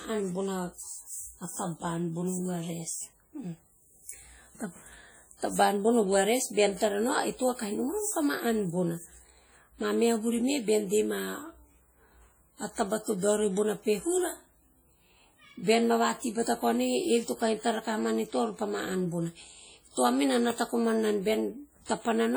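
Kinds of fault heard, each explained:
WMA compression: The speech rings and smears throughout, with a washy hiss that swells and fades along with the sound and a heavy, watery loss of fine detail where weaker components have dropped out entirely. The likely cause is Windows Media Audio coding: its long transform blocks spread quantisation noise over tens of milliseconds around each sound, and the starved bit budget, which fits a rate near 32 kbps, zeroes faint spectral lines even though content still reaches about 20.1 kHz.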